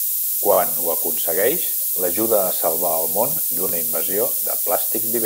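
Throughout the speech there is a steady, thin hiss that climbs sharply toward the top of the band. This is low bit depth with noise shaping. The signal seems to have only about 4 bits, and the rounding error has been pushed upward in frequency, leaving the hiss not far below the speech. Plain dither or broadband noise would sound flat across the spectrum rather than tilted toward the treble.

Right after "a salvar el món", from 3.69 to 3.71 s, a repeated buffer causes a quick stutter. The playback device did not receive new audio in time and played the last 21 ms block a second time, which fits a 1024-sample buffer. The joins are hard and nothing is skipped, which separates this from a dropout or a gap.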